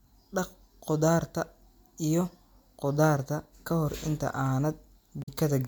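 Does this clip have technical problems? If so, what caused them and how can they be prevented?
Yes. The stream likely lost a handful of samples twice, at 3.20 s just before "ka hor inta" and at 4.46 s just after "ka hor inta", each gap only a fraction of a millisecond. These are dropped samples: the waveform leaps from one value straight to a later one, and that step is heard as a single sharp click with nothing of the speech missing. Giving the capture and playback buffers more headroom so they never underrun prevents it.

From 5.20 to 5.29 s there is damaged data in a compressed stream. Corrupted bytes made the decoder misread the frames there, lose its place and hunt for the next valid frame header. For those 90 ms the speech turns into a chirp, squawk, click or short hole before decoding recovers. Sending the stream over a checksummed, error-corrected transport and verifying the file's integrity before playback prevents it.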